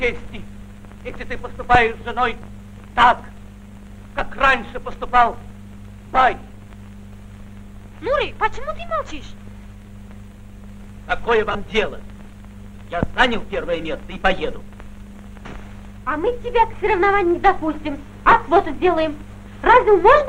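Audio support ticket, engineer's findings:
Lost LE Audio frames, 11.52 to 11.55 s. Brief noisy smear replacing the sound, no gap to silence. Component: Bluetooth LE Audio link, LC3 decoder concealment. Decoder reused last spectrum with randomised signs; about 22.5 ms missing, which fits three 7.5 ms frames. Distinct from plain dropout (silent hole) or buffer underrun (click or repeated chunk): here tonal content turns to noise-like wash, loss too short to fade out.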